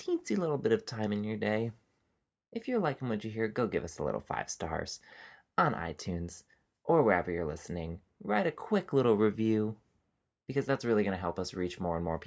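No technical faults can be heard anywhere in the speech.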